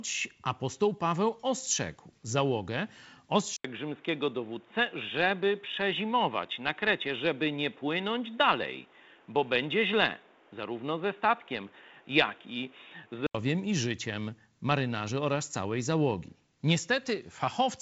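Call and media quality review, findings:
Input likely switched to a poorer device, 3.56 to 13.35 s, 80 ms gap at switch. Band drops to nothing above 3.8 kHz versus 7.7 kHz on the G.722 path. Dull, boxy tone, new noise floor roughly 35 dB down, level unchanged. Band narrows just before "i życiem marynarzy oraz".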